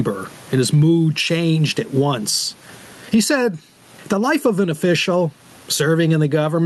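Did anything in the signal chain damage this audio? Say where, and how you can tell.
Yes. Gain pumping runs through the whole clip. The gain swings by about 20 dB, so loud and quiet passages sit unnaturally close in level and the speech sounds squashed. That points to the input stage: the microphone gain is likely set far too high, and a fast limiter or compressor clamps each loud syllable, then releases in the pauses.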